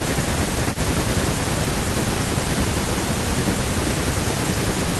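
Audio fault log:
0.02–0.18 s, 0.6–1.2 s, 1.39–2.49 s and 3.12–4.99 s, speech suppressed in double talk: the echo canceller likely confused overlapping talk with echo, pulling the speech down by about 15 dB in dips.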